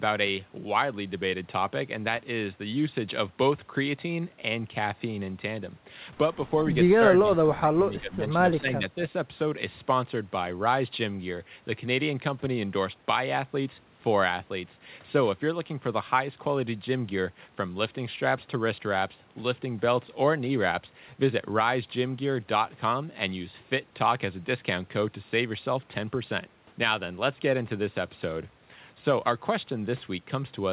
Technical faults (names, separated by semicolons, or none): speech suppressed in double talk